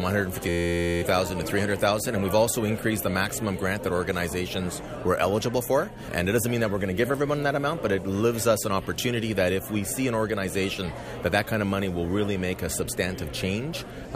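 From 0.49 to 1.02 s a system hang loop replaces the sound with one 11.6 ms fragment repeated exactly, which fits a 512-sample buffer, giving a steady 86 Hz buzz. Unlike mains hum, it starts and stops abruptly, with little or no audio lost.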